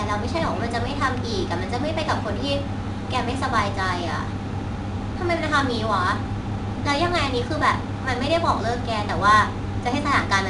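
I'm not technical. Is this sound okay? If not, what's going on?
No, not quite. The whole thing has been squeezed with 4-bit ADPCM compression, an old-school trick that saves each tiny slice of sound as a rough little step from a guess instead of the real value. Those rough steps leave a gritty hiss riding along with the speech, and you'll notice it getting louder whenever the voice does. The very top sparkle is gone too, since nothing above about 10.7 kHz made it through.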